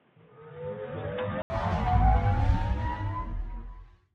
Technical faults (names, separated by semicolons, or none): input switched to a poorer device